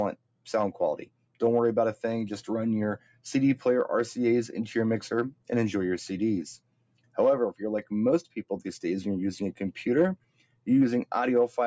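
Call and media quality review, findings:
Noise suppressor applied to music or sounds, whole clip. Speech-tuned suppressor misreads steady tones and tails as noise; gain swings around 20 dB. Waveform envelope pumps, with attacks intact and sustains sagging. Spectrogram shows held partials fading in and out. Content above 8 kHz absent from call microphone processing, which is normal.

Sound cut by the noise suppressor at 0.16–0.47, 1.06–1.41, 2.98–3.25, 5.31–5.49, 6.56–7.17, 8.23–8.44 and 10.16–10.67 s. Suppressor clamps sustained or decaying sound, up to about 21 dB. Waveform shows envelope troughs. Spectrogram shows dark gaps across held bands.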